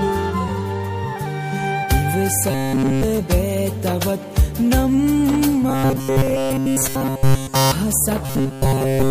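Robotic sound from repeated short buffers appears three times: 2.51 to 3.03 s, 5.69 to 7.72 s, and 8.26 s to the end. In each stretch the sound turns into a rigid, metallic buzz at 134 Hz. The first two are entirely buzz. The last is mostly buzz. The likely cause is audio arriving too seldom, with a roughly 7.5 ms fragment replayed over and over while real audio is skipped.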